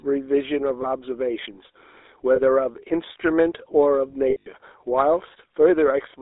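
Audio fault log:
Throughout: GSM full-rate codec. The speech is confined to roughly 300 Hz to 3.7 kHz and carries a constant buzzy, gravelly grain, which fits 13 kbps full-rate coding. A vocal-tract model is driven by sparse, regularly spaced pulses. Plain band-limiting would only dull the sound, but this roughens its texture.
0.82–0.85 s and 2.36–2.40 s: lost GSM frames. Each is a brief metallic ring lasting about a single 20 ms frame. The decoder repeats the last good frame's settings. A dropout would leave a gap, but here the sound is held with a rough, tinny sheen.
4.30–4.48 s: lost GSM frames. About 140 ms of losses are scattered over 160 ms, with the longest run around 70 ms. The concealment rings across the run. Random clicks would be sharp, but this sounds like a smeared metallic hold.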